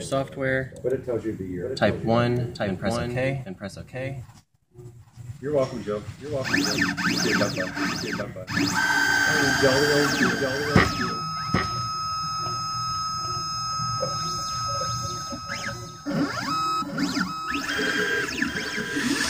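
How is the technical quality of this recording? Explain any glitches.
The recording carries one persistent fault that muddies the whole clip.

A doubled audio track runs from start to finish: every sound is followed roughly 0.7 s later by a second, full-band copy about 5 dB quieter. The likely cause is the same signal being captured twice, once through a slower path, or an edit holding two copies out of step. Because the copy has no decay or room colour, it reads as a distinct, dry repeat rather than reverberation, overlapping later material.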